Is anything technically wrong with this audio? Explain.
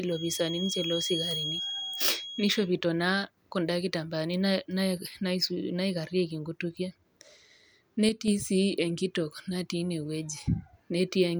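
Yes, two things stand out in this speech clip.

From the start to about 2.71 s there's a feedback whistle: a thin, steady tone near 3.3 kHz sitting a few dB under the speech and swelling and fading slowly. It's likely a speaker-to-mic loop hovering just at the edge of ringing without taking off.

Between about 8.09 and 8.28 s one channel drops out. The level drops abruptly by about 6 dB for that stretch, which is likely one side of a stereo pair vanishing, so the mono sum keeps only half of the shared signal.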